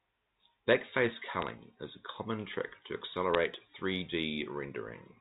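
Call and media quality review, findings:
Bit errors on a digital phone line, 1.42 to 1.49 s: short burst of sharp ticks over the speech, a handful of frames' worth. Digital trunk or line interface flipping bits, roughly 0.2 percent, each hit knocking out one sample.

Same again at 3.34 s: a quick crackle, single tick cluster. Sign and high-order bits give the loudest clicks. Underlying G.711 mu-law path still sounds clean, with the expected band limit at 4 kHz.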